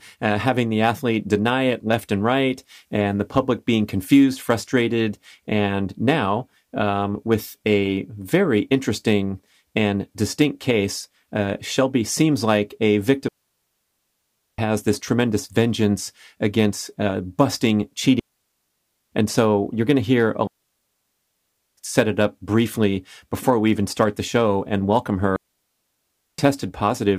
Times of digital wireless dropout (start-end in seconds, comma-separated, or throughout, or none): 13.28-14.58, 18.20-19.11, 20.47-21.77, 25.36-26.38